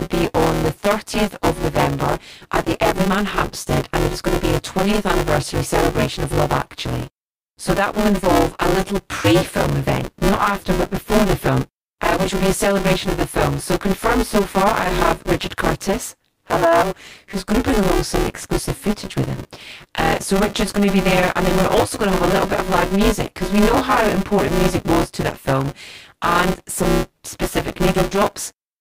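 Buffer tearing runs through the whole speech clip. The writing side and the hardware reading side of the ring buffer have drifted out of step, so in every period roughly half of the buffer still holds audio from about 15 ms earlier, with hard joins on both sides. The joins repeat at 200 Hz, which fits a 5 ms period, and they give the speech a continuous robotic buzz that follows the signal and stops in the gaps.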